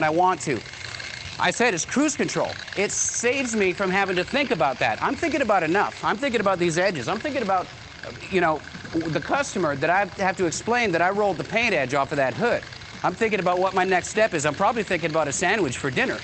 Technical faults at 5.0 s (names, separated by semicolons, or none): none